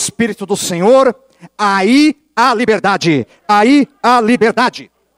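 From 2.05 s to the end, a time-stretched section: the audio was likely squeezed by software to fit a shorter length, dropping short pieces to hold the pitch. The speech suddenly runs about 1.73 times faster, sounding rushed at unchanged pitch.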